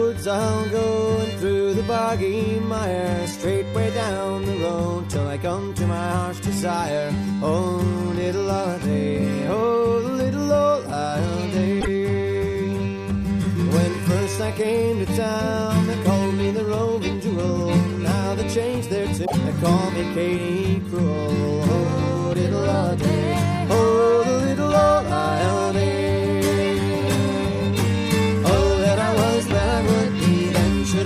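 At 11.77 s and again at 19.24 s the audio breaks up for about a tenth of a second each time, heard as a short chirp, squawk, click or gap where the sound should continue. Both are damaged data in a compressed stream: part of the encoded file was lost, zeroed or overwritten, so the decoder misread or discarded the frames there, lost sync and searched for the next valid frame header before playback resumed.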